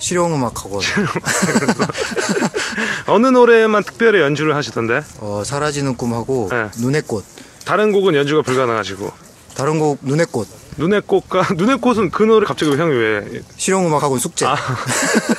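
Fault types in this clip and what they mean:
Compressed frames skipped: a run of coded frames never gets played, so the audio jumps ahead, roughly 150 ms at 6.50 s and 12.43 s and about 50 ms at 13.99 s.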